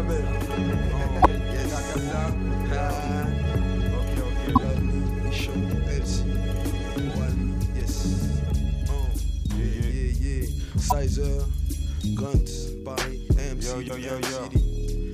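Five brief bursts of damaged data in a compressed stream occur at 1.22–1.26, 4.53–4.58, 7.77–7.82, 10.88–10.93 and 13.86–13.90 s, each about 40 ms long and roughly 3 s apart. Corrupted bytes made the decoder misread those frames and hunt for the next valid header.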